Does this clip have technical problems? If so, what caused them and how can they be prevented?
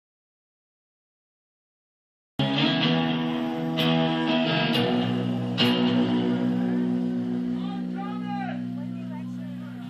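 Yes. There's an audio dropout to silence from the very start until 2.39 s: pure silence, no room tone at all, before the sound kicks in mid-flow. That's most likely the input going missing while the recorder kept writing. Check cables, links and mute states before hitting record.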